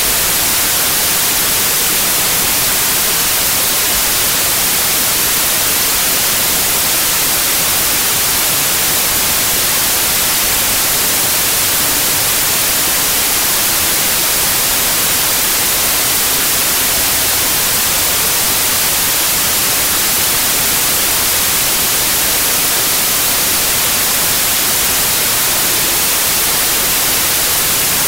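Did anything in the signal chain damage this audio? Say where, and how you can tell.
Yes: wrong sample width at format conversion. Loud noise buries the audio throughout, at half speed and an octave down, which fits 32-bit samples read as 16-bit.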